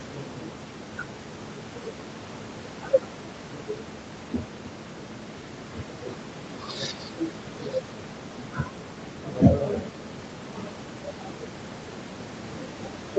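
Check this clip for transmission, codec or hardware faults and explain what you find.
Nothing to flag: the speech shows the normal call-path limits, with bandwidth topping out at 8 kHz and room noise about 14 dB below the speech.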